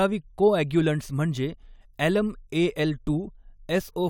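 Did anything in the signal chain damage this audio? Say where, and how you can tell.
No, nothing in this recording points to chain damage.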